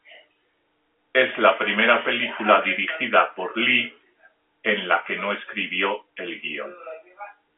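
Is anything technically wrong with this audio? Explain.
No, nothing is technically wrong: the speech sits in the normal telephone band of roughly 300 Hz to 3.4 kHz with nothing above about 3.7 kHz, which fits ordinary G.711 telephone coding at 64 kbps rather than any fault.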